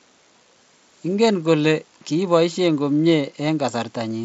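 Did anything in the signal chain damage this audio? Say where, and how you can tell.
Yes. The damage is at the driver or buffer stage, with chunks out of order between 0.91 and 0.98 s. One block of about 23 ms was written late and plays two chunks after its proper place. No audio is lost, but the sequence is scrambled, leaving three hard joins. You hear a brief jumbled stutter. The mSBC headset link's light band-limited graininess is separate from this.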